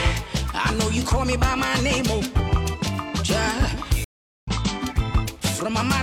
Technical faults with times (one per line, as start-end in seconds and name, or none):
4.04-4.48 stream reconnect